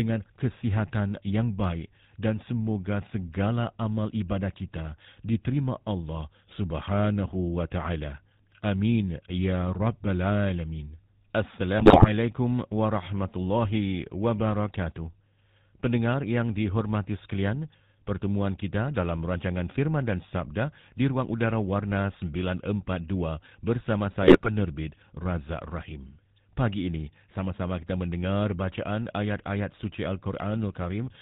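From start to finish the speech carries GSM full-rate codec damage: nothing passes above 4 kHz, and the pulse-driven vocal-tract model gives a buzzy, gravelly roughness, as expected from the 13 kbps coder. Unlike a plain low-pass, the grit sits within the voice itself.

GSM bit errors strike at 11.78–12.09 s, just before "warahmatullahi wabarakatuh", and again at 24.22–24.50 s. Corrupted filter, pitch and gain values make the decoder squawk, pop and gargle with sudden level jumps, unlike the steady codec roughness around them.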